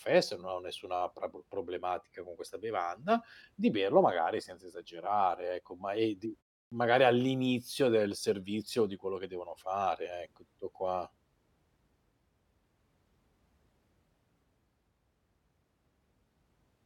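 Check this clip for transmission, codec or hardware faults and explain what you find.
One fault stands out in this speech. Clipped start after a pause, 6.65 to 6.72 s: the output device dozes through the 0.31 s gap after "ecco ma è d" and wakes late, losing 66 ms, so "magari all'inizio del servizio" begins abruptly.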